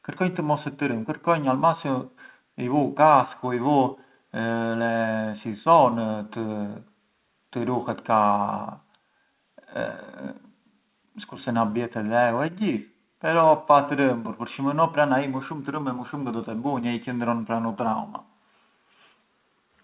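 No technical faults can be heard anywhere in this speech.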